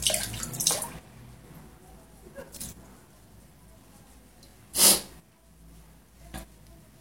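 The audio was handled in chunks of about 3.0 s, and each chunk began about 25 ms before the previous one had finished. This is the fault of overlapping chunks. At each join, a 25 ms slice of the sound plays twice, at 1.48–1.50 s and again at 4.50–4.53 s. The repeat is heard as a brief click or stutter. The two events fall about one chunk length apart, which marks them as boundary artefacts rather than part of the sound itself.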